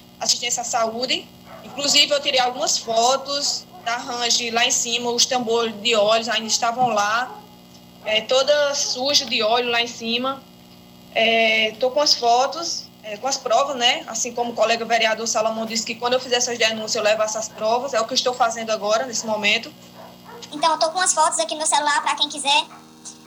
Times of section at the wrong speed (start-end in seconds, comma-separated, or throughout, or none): 20.51-23.27